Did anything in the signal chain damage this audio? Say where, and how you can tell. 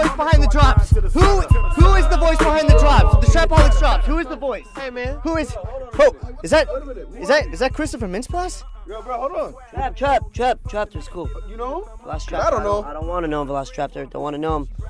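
No, nothing in the signal chain damaged this audio. None of the stages between capture and playback left any trace on the sound that a listener could point to.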